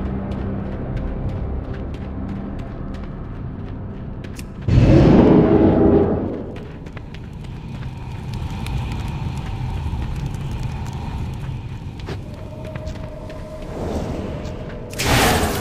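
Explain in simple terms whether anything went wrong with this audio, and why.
From about 4.78 to 5.56 seconds, the signal got a little too big for one stage of the recording chain to handle, so the tops of its loudest waves were sliced off flat. That is hard clipping, and it adds a rough, crackly edge to the peaks in that stretch.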